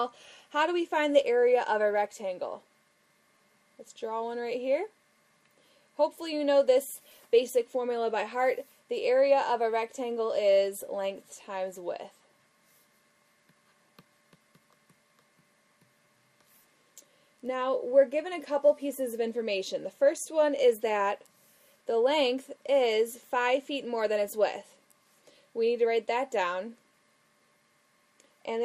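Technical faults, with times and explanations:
Throughout, MP2 compression: the sound is dull, with a gurgling, granular distortion that is plainly audible across the whole clip. This is likely the work of MPEG Layer II coding at a low rate, around 80 kbps. The coder splits the spectrum into 32 equal sub-bands and shares a limited bit budget among them; when bits run short, the upper bands get switched off, which removes the top end, and the remaining bands flicker in and out under coarse quantisation, producing the grainy, bubbling texture.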